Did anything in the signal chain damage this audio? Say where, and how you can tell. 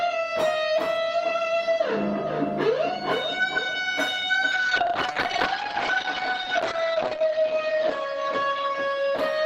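Yes. From 4.52 s to the end, the audio turns rough and muffled, with the top end cut from 20 kHz down to 8 kHz and the coarsest stretch lasting about 2.8 s. This is a call bitrate drop at the codec, which fits 32 falling to 12 kbps.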